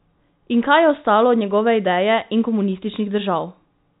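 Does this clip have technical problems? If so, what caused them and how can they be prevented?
No, there are no technical problems to find in this speech. The audio has the narrow sound of G.711 telephone coding, with nothing above about 3.8 kHz and at most a faint trace of its quantisation noise.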